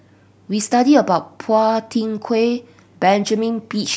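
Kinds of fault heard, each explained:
No technical faults can be heard.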